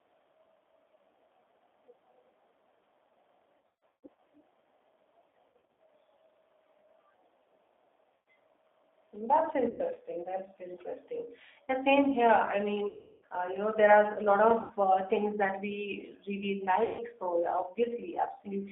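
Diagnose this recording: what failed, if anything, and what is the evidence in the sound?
Codec stage: the speech passes through a G.729 codec at 8 kbit/s, confined to roughly 300 Hz to 3.6 kHz. The roughness is plainly audible and goes beyond simple band-limiting. Voiced sounds have a grainy, synthetic edge because the decoder rebuilds them from a filter and sparse pulses, not from the original waveform.

Network stage: VoIP packet loss concealed by the speech codec appears at 3.58–4.18, 5.30–5.80, 8.14–8.26, 9.70–9.82, 12.89–13.25, 14.61–14.73 and 16.84–17.03 s. The first two are scattered losses, with the longest runs about 150 ms and 60 ms. These gaps are not silent dropouts. The decoder stretches its last pitch and filter into a fading buzzy tone or coloured noise, and the voice stays weak briefly afterwards while its frame-to-frame state recovers.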